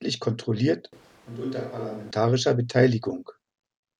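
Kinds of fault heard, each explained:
Switch to a distant microphone: the close microphone's signal likely dropped out, leaving a mic placed much further from the talker to carry the speech from 0.93 s to 2.11 s. Over that stretch the voice turns suddenly roomy and hollow, with thinner bass and the level falling by roughly 10 dB. Room noise rises to sit only about 25 dB below the speech. At 2.11 s the close, fuller sound snaps back just as abruptly.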